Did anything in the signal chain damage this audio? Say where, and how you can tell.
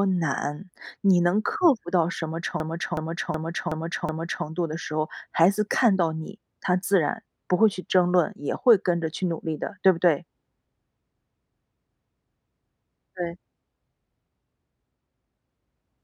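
Yes, at the driver or buffer stage there is a system hang loop, from 2.60 to 4.46 s and again from 11.15 to 13.00 s. Each time, a 0.37 s slice of speech repeats exactly five times, a machine-gun stutter at about 2.7 Hz. That fits a 16384-sample ring buffer replaying while the host stalled. Little or no audio is skipped afterwards. On a spectrogram, identical blocks tile side by side, and the waveform shows copied segments.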